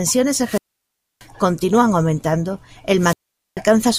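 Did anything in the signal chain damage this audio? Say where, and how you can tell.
Yes. The wireless microphone's radio link faded twice, and each time the receiver's squelch cut the output: a wireless microphone squelch dropout. A rise of hiss at 0.40 s gives way to about 0.63 s of near silence, the sound returning by 1.26 s before "continúan aumentando el". After those words a second dropout runs from 2.97 s to 3.60 s, muted for about 0.44 s.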